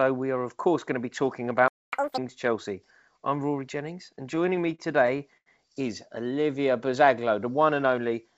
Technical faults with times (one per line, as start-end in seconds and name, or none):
1.68-1.93 playback stall
1.93-2.18 catch-up at higher speed
4.16-5.48 repeated stalls (stutter)
6.43-7.40 jitter buffer slow-down